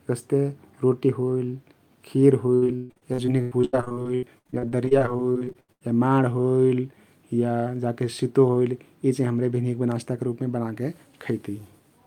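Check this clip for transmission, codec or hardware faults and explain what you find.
Repeated packet loss (robotic sound) affects the speech from 2.55 to 5.83 s. Dozens of packets went missing in close succession, each hole patched by stretching the preceding sound. Roughly 1.2 s of that stretch is filled-in audio, with gaps up to 136 ms, so the speech turns choppy with pieces missing.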